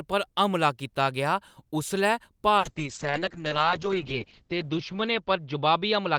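At 2.59 s a call bitrate drop sets in and lasts to the end of the clip. The bandwidth estimate fell and the encoder dropped from 64 kbps to 7 kbps, holding the lowest rate for 1.83 s. Audio bandwidth narrows from 20 kHz to 8 kHz, so the speech loses its upper sibilance and air and turns muffled, while the coarser coding adds a rough, watery texture that does not recover before the clip ends.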